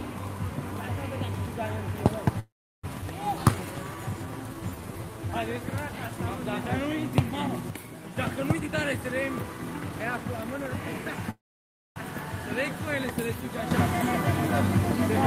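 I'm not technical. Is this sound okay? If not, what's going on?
No, it has several faults.

Call audio freeze, 2.39 to 2.85 s and again 11.30 to 11.98 s: the sound stalls, briefly smeared into a fading buzz, then goes quiet for about 0.36 s the first time and 0.59 s the second. The likely cause is pieces of the audio getting held up in transit, leaving the player with nothing to play. When they arrive it carries on where it stopped, so nothing is lost. The audio just runs later.

Skip ahead, 3.01 to 3.04 s: right after the first freeze the audio jumps forward with almost no gap. About a third of a second of sound is simply missing, and the two sides are stitched together. A stretch of audio was dropped on the way or thrown out by the player while later audio was already waiting.

Jitter buffer slow-down, 3.39 to 5.32 s: the sound plays at 84% speed but keeps its pitch, so it feels drawn out. 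The player was running short of audio and stretched what it had by repeating tiny slices over and over, adding 0.31 s in total.

Sudden gain jump, 7.70 to 8.17 s and 13.71 s to the end: the volume snaps down in the first stretch, then back up at 8.17 s. At 13.71 s it snaps up and stays louder. The background noise moves with it, which points to a volume setting likely applied instantly rather than eased in.

Jitter buffer speed-up, 8.53 to 11.24 s: the sound runs at 115% speed at the same pitch and comes across as hurried. The player had too much audio waiting and trimmed out many tiny slices, roughly 0.4 s in total, to cut the delay.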